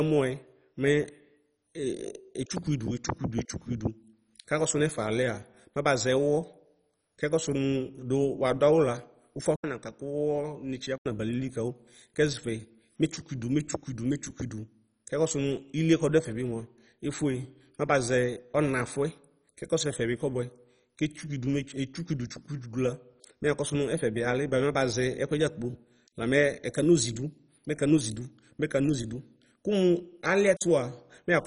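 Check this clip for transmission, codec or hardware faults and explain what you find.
Two faults are audible in this speech: heavy compression damage throughout, and a brief drop in quality around 10 s.

MP2 compression is the likely cause of the damage. Nothing remains above 10.4 kHz. At a rate that points to about 32 kbps, Layer II starves its upper sub-bands, shutting them off and coarsely quantising the rest. The speech sounds dull, gurgling and granular.

From 9.56 s to 11.06 s, the input was likely switched to a poorer device. An 80 ms silence marks the switch. The band then narrows to nothing above 8.8 kHz. The speech turns boxier and a little quieter, over a faint new noise floor.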